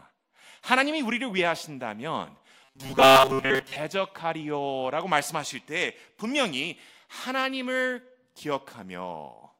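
From 2.64 to 3.76 s, just after "하나님이 우리를 위하신다면", the speech turns into a rigid metallic buzz near 134 Hz: robotic sound from repeated short buffers. Audio likely arrived too slowly, so roughly 7.5 ms segments were looped across most of that stretch while real speech was skipped.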